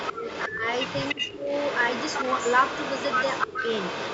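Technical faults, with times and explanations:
Throughout, echo leak: a delayed copy of the speech trails the direct sound by about 304 ms, sitting around 10 dB lower. This is likely loudspeaker pickup on the far end that its echo canceller failed to remove. Unlike room reverberation, it is a distinct repeat rather than a smooth decaying tail.
0.13 to 0.26 s, 0.47 to 0.66 s, 1.14 to 1.49 s and 3.46 to 3.6 s, speech suppressed in double talk: the speech sags sharply, by roughly 20 to 30 dB, in brief bursts, likely because the canceller ducked the talker while the other side spoke. Unlike packet dropouts, the talker is turned down by the canceller rather than lost in transit.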